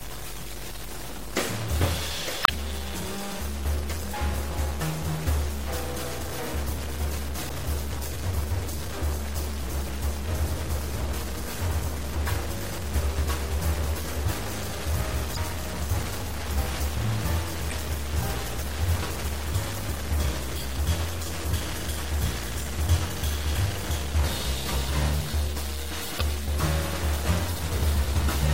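From the start, a distortion runs through the whole clip, and quiet passages fill with noise. The likely cause is a stuck bit in the data, shown as stepped offsets on the waveform and broadband haze on a spectrogram.

Throughout, the sound is also watery and swirly, with dull treble and smeared attacks. This fits MP3 compression at a low bitrate around 64 kbps. A spectrogram would show a hard high-frequency ceiling and flickering holes where weak components drop out.

Damaged data in a compressed stream produces short chirps or blips at 2.42–2.50 s, 7.47–7.51 s, 15.33–15.37 s, 17.68–17.73 s and 26.17–26.22 s. Each is where the decoder lost sync. Each one shows as a brief vertical smear on a spectrogram and a waveform discontinuity.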